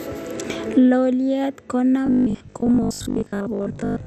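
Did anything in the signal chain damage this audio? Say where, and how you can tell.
Yes. The whole clip sounds dull and plainly gurgling, with a granular roughness on the speech and nothing above 14.4 kHz. That points to the codec stage, most likely MP2 compression at a low rate, consistent with roughly 64 kbps. Starved of bits, Layer II shuts off its upper sub-bands entirely and quantises the remaining ones coarsely, so the top end disappears and the surviving bands flicker on and off.

From 2.07 s to the end at 4.07 s, the speech turns into a rigid, metallic buzz pitched at 50 Hz that still loosely follows the words. This is robotic sound from repeated short buffers, at the driver or buffer stage, and the likely cause is fresh audio arriving too slowly. The software loops the last block instead, and a 50 Hz buzz fits a 20 ms buffer. Most of this stretch is repeats rather than new audio.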